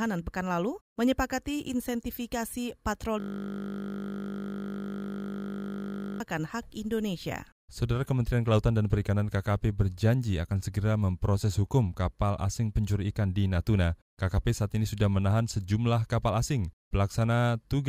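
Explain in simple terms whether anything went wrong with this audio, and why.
Something did go wrong: a system hang loop from 3.20 to 6.20 s. The computer froze while the sound hardware kept replaying the same 20 ms piece about 150 times, producing a steady 50 Hz buzz rather than the choppy gaps of a dropout.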